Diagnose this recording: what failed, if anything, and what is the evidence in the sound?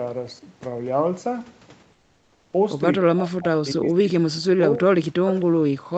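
From 1.92 to 2.53 s the background is replaced by comfort noise for about 610 ms: a steady, featureless hiss about 7 dB quieter than the real room sound. On a spectrogram, the textured noise floor turns into a smooth, uniform band. This is likely codec discontinuous transmission at the sender, with the gap filled in at the receiver.

From 3.0 s to the end, the speech is suppressed in double talk. The talker's level dips and breaks up, and at its deepest the drop is around 40 dB. The waveform envelope shows gouged, chopped sections. In call processing, the echo canceller likely turned down both its own talker and the loudspeaker echo while both sides were active.

At 5.40 to 5.45 s there is an echo leak: a faint scrap of the speech returns 262 ms late, some 35 dB below it. A spectrogram shows a weak, delayed copy of the earlier speech pattern. Residual loudspeaker pickup likely got past the echo canceller in call processing.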